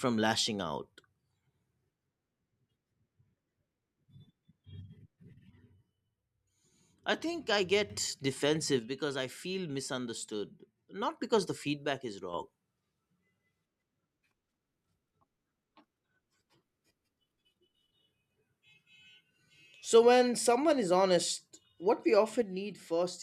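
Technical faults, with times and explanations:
5.50–7.90 s, 8.79–11.19 s, 11.85–12.33 s and 22.42 s to the end: one channel drops out. The level dips abruptly by about 6 dB each time, likely one stereo side cutting out before the mono sum.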